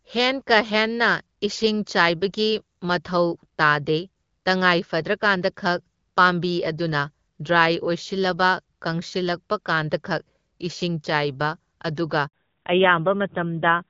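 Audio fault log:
12.27–12.33 s, handover gap: The speech cuts out for 60 ms. No frames arrived while the call switched networks, so that stretch is simply lost.
12.33 s to end, fallback to narrowband: Everything above 4 kHz disappears and the speech turns duller and rougher. This fits a drop from HD Voice to a narrowband codec near 7.4 kbit/s.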